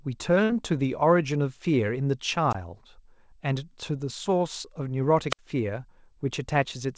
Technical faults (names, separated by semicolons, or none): burst of packet loss; wireless microphone squelch dropout